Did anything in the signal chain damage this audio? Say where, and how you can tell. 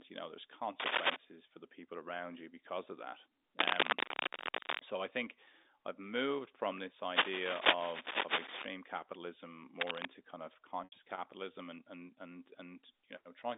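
Yes. The analogue wiring stage shows cable scratch noise in four places: 0.80 to 1.16 s, 3.57 to 4.80 s, 7.11 to 8.65 s and 9.80 to 10.07 s. Each is a dense, irregular burst of scratching and rustling laid over the speech. The first and last sit roughly 5 dB above it, and the two longer middle ones roughly 10 dB above. That uneven, crackling texture points to a likely cause of a worn cable or connector being moved, so its contact resistance jumps rapidly.

The network stage shows packet loss with pitch repetition at 10.84 to 10.92 s, a gap of 80 ms, which fits four 20 ms packets dropping together. The receiver concealed it by repeating the last pitch period, so the speech briefly sounds held and buzzy before fading into silence, then fades back in. Through this gap and the rest of the clip, the telephone band from 250 Hz to 3.7 kHz is consistent with G.711 A-law coding.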